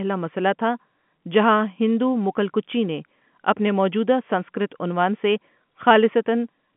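Nothing faulty can be heard in this speech.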